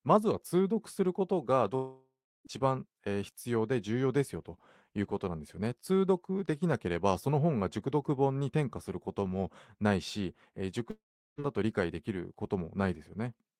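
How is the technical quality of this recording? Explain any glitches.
The speech has two gaps where the sound breaks off and is lost, both consistent with a long network dropout.

From 1.75 to 2.47 s and again from 10.91 to 11.40 s, the audio stops arriving, most likely because packets were lost in transit. The receiver stretches the last sound into a fading buzz, then leaves near-silence for about 0.34 s and 0.39 s. The speech resumes with roughly 0.7 s and 0.48 s missing. On a spectrogram, smeared, repeating bands decay into a dark gap. The waveform shows a shrinking tail, then a flat line.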